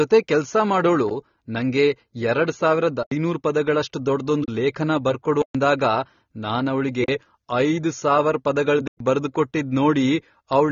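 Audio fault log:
Throughout: AAC compression. Nothing is heard above 6.9 kHz, so the speech sounds dull and sibilants carry a fizzy, warbling smear from coarse spectral quantisation. The damage is plainly audible and likely comes from AAC-LC encoding at a low bitrate near 24 kbps.
1.09 s, 3.03–3.12 s, 4.44–4.48 s, 5.42–5.55 s, 7.04–7.08 s and 8.88–9.00 s: block of digital silence. The output drops abruptly to silence and back. The 15 ms gap is a tick, and the 43 to 128 ms gaps are audible holes, the 43 and 85 ms ones fitting 2048- and 4096-sample buffers going unfilled.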